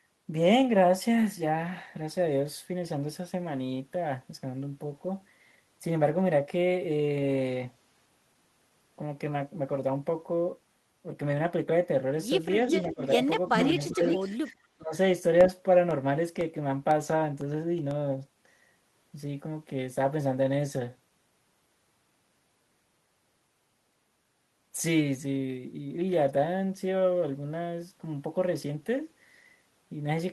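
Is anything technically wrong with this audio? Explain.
Yes. The speech has three kinds of fault, clustered between about 12.7 and 19.4 s.

Echo leak appears at 12.66–13.27 s, 13.52–13.88 s and 14.04–14.35 s. A delayed copy of the talker arrives about 0.39 s late, the likely result of a far-end loudspeaker echo the canceller failed to remove. In the first two bursts the copy is about as loud as the original, and in the third about 5 dB below it. The steady 0.39 s lag is what separates it from room reverberation, which would smear continuously rather than repeat as a distinct, fixed-delay copy.

Speech suppressed in double talk overlaps these echoes at 12.93–13.2 s, 13.56–14.01 s, 14.31–14.53 s and 14.77–14.94 s. The canceller likely could not tell the near talker from the echo while both were present, so it turned everything down. The level dips about 10 dB at first, then about 15 dB, and about 25 dB in the last instance, each dip lasting roughly 150–200 ms. 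Unlike a network dropout, these are gain ducks tied to the overlapping speech rather than clean gaps.

Periodic USB or driver dropouts run from 15.41 to 19.41 s. About ten tiny gaps, each around half a millisecond and filled with silence, fall exactly every 0.5 s and are heard as regular ticks whenever speech is present. A stalled bus or audio driver likely causes them. Their rigid spacing distinguishes them from random packet loss on the Opus call path, whose coding remains in place throughout.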